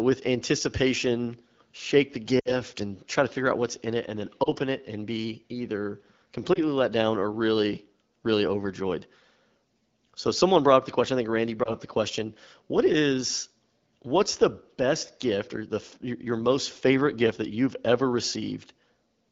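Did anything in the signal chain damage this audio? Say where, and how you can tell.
Yes: lost AMR speech frames at 2.39–2.56 s, 4.43–4.49 s, 6.53–6.60 s and 11.64–11.71 s, a network-stage fault. The decoder filled each gap by reusing the last good pitch and vocal tract settings at falling gain. This gives brief warbles, with a longer loss of about 60 ms at 2.39 s that drops to near silence.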